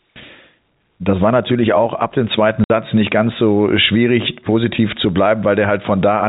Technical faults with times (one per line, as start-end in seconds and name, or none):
2.64-2.70 packet loss filled with silence